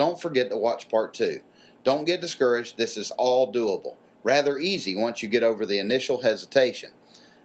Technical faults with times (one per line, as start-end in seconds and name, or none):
none